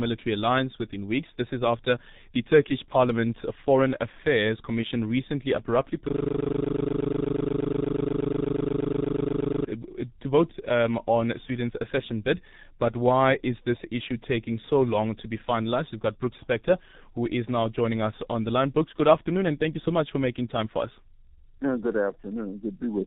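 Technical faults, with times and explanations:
throughout, G.723.1 codec: the speech is muffled and hoarse at about 6.3 kbit/s, with nothing above 4 kHz and smeared consonants. The slowly updated 30 ms frame model causes heavy damage. Unlike simple low-pass filtering, the voice itself sounds rough and coarsely modelled.
6.08 to 9.66 s, system hang loop: after "recently abruptly", one 40 ms slice of audio repeats exactly, around ninety times, until "to vote um on" resumes. The result is a rigid 25 Hz rattling buzz. The frozen system left the hardware replaying one buffer, so every repeat is identical, unlike a stutter from jittery dropouts.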